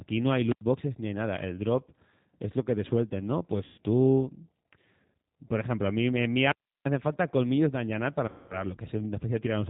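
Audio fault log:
Throughout: G.729 codec. The speech is squeezed through an 8 kbit/s vocal-tract-filter-and-pulse model that removes everything above 4 kHz. The result sounds band-limited, slightly rough and synthetic, and the coding damage is plainly audible across the clip.
0.47–0.61 s and 6.44–6.85 s: wireless microphone squelch dropout. The FM link fades, hiss rises and the receiver squelch mutes the output, leaving near-silent holes of about 88 ms after "no hay" and about 337 ms after "a mí en mi". Sound resumes at "boxes ni hay nada" and "hacen falta colmillos de".
3.64–3.81 s and 8.28–8.64 s: VoIP packet loss concealed by the speech codec. Gaps of 140 ms and 220 ms are filled by the decoder extrapolating its last pitch and filter at falling gain. Each gap is heard as the speech stretched into a fading buzzy tone or coloured noise, and the speech stays weak and distorted briefly after the packets return.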